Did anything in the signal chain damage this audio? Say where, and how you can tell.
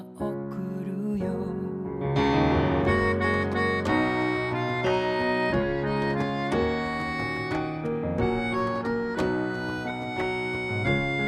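No, nothing in the signal chain stood out as damaging this audio on listening.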